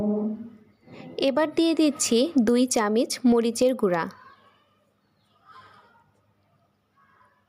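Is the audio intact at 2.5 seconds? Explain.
No, at 2.5 seconds there are level swings of around 10 dB, so the sound is squashed. This gain pumping runs throughout and is likely from gain set far too high, with a fast limiter clamping down on every peak.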